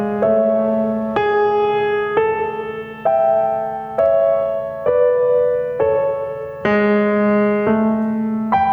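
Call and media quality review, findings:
Gain pumping throughout the music. Background level swells in gaps, then ducks under each loud hit, a swing of around 10 dB. Dynamics squashed. Likely cause: input gain set far too high, fast limiter or compressor clamping every peak.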